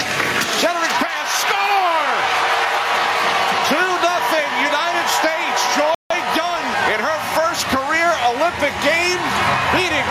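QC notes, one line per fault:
Throughout: gain pumping. The gain swings by around 10 dB, so the level breathes in time with the material. Loud and soft passages sit unnaturally close together, and the whole clip sounds squashed. The likely cause is input gain set far too high for the microphone, with a fast limiter or compressor clamping down on each peak and releasing in the pauses.
5.95–6.11 s: Bluetooth stall. The audio drops abruptly to silence for about 0.16 s, then resumes rather than fading back in. The hard cut and clean restart suggest playback simply halted. This is likely a wireless link stall: interference held up packets, the headphones' buffer ran empty, and sound stopped until the retransmitted data arrived and refilled it.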